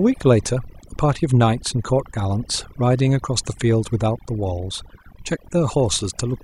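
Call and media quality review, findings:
Overdone noise removal, throughout. Background near-silent with twinkling specks. Probable component: noise suppressor, set too aggressive. Bands near the noise estimate are cut individually, taking quiet voice detail with them. Unlike a noise gate, which mutes everything at once in pauses, this leaves isolated tonal specks. Unlike codec artefacts, the damage follows the noise level, not the bit budget.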